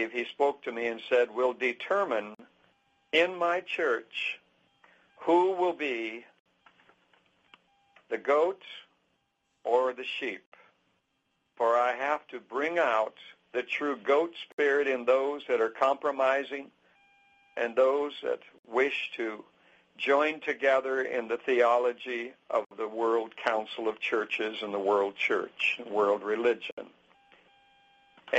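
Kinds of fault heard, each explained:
Gap at a join of encoded pieces: untrimmed encoder delay and end padding leave 47 to 63.5 ms silences every 4 s; sound resumes where it stopped, unlike a dropout, which skips material.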